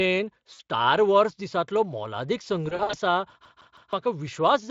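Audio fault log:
0.53–0.60 s and 2.69–2.96 s, VoIP packet loss concealed by the speech codec: the decoder stretches its last pitch and filter into a buzzy, fading tone. The first gap is 60 ms, consistent with three 20 ms frames. The second scatters 140 ms of losses over 240 ms, the longest run 60 ms, so the sound stays weak and distorted between losses. Unlike a skip, nothing earlier repeats exactly; the sound smears and dies away under the light Speex coding.
3.45–3.93 s, CD stuck on one turn: the same 0.16 s segment repeats three times, each jump marked by a brief mute, as the laser falls back one track per revolution. The identical, evenly timed repeats set it apart from concealment's decaying, buzzy extrapolation.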